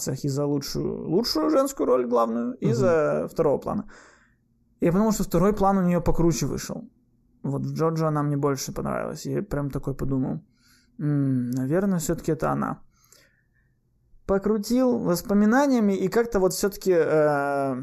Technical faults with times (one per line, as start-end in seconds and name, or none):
0.00-17.83 channel delay (comb filtering)